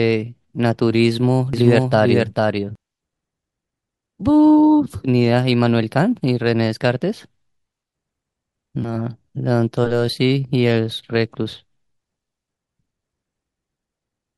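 From 1.53 to 2.75 s the speech has a doubled audio track: a second full-band copy trails the original by roughly 0.4 s, a few decibels quieter. It likely comes from a second capture path or misaligned edit. Unlike an echo, the copy carries no decay or room colour and switches on and off abruptly.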